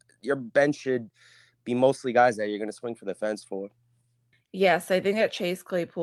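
Listening to this speech recording, nothing stood out as a technical problem at any point.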